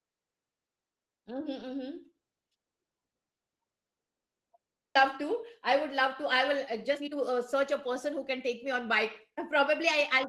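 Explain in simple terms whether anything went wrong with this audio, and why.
At 4.95 s there is a skip ahead. About a second of speech is missing, and the two sides are joined with no gap.

From 6.73 to 8.82 s, and again from 9.30 s to the end, there is a jitter buffer speed-up. The receiver had too much speech stored, so it trimmed tiny pieces to catch up. The first stretch runs about 14% fast, the second about 4%. Pitch stays the same.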